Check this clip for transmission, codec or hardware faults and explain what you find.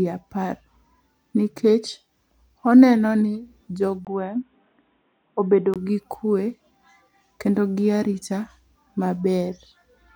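There's one fault in this speech: an input switched to a poorer device, from 4.05 to 5.76 s. After a brief 20 ms gap, nothing comes through above 3.8 kHz, so the sound turns dull and boxy, with a faint new noise floor at about the same level. That's likely a drop to a narrower-band microphone or headset call profile.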